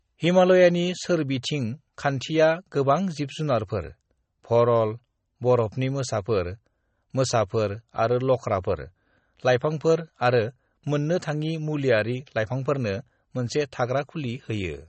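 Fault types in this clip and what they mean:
MP3 compression, throughout the clip: the speech has no content above 8.3 kHz and carries plainly audible codec damage, likely from MP3 encoding at a low bitrate, which fits about 32 kbps. Short of bits, the encoder cuts the treble at a fixed frequency and zeroes weak spectral lines that switch on and off from frame to frame, giving a watery, swirling texture, metallic chirps on s sounds, and smeared attacks.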